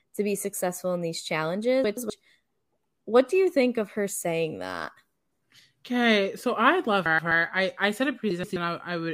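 Three short stretches of this speech, at 1.84 to 2.10 s, 7.06 to 7.32 s and 8.31 to 8.56 s, have frames out of order. In each, two neighbouring blocks of about 128 ms were swapped, which points to runs of four frames. The result is a brief garbled flutter. Unlike a dropout or a repeated frame, no sound goes missing or is played twice. The two halves are simply reversed.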